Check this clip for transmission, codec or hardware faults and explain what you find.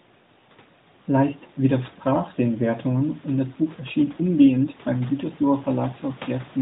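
Nothing wrong turns up anywhere in this recording.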